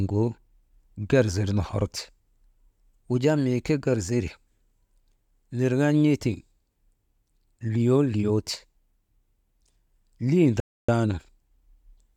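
At 10.60 s the speech stops dead for about 0.28 s, a rebuffering stall: playback ran out of downloaded audio and waited, then resumed at 10.89 s exactly where it left off. Nothing is skipped, only delayed. The waveform shows a flat gap, and the spectrogram a blank vertical band.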